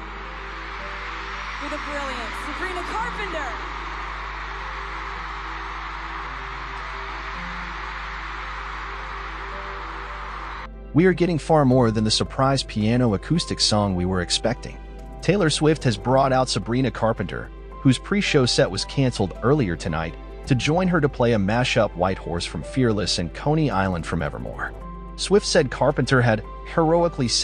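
From start to finish a steady 50 Hz mains hum sits about 15 dB below the sound, from power-line pickup through a ground loop or nearby transformer. Unlike broadband rumble, it holds one fixed pitch with some low harmonics and never drifts or fluctuates.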